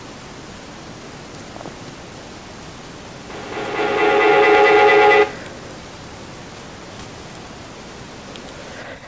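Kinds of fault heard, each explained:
Feedback howl: two endpoints sharing one room close an acoustic loop from microphone to loudspeaker and back with more than unity gain, so each pass returns louder and narrower in frequency. From 3.3 s a tone of around 400 Hz grows out of the sound. It pulses at roughly a fifth of a second, which points to the loop's round-trip delay, and peaks about 23 dB above the speech before ending at 5.65 s.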